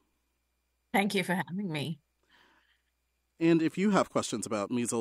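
Nothing here calls for comment; you can listen all the way through without running into any trouble at all.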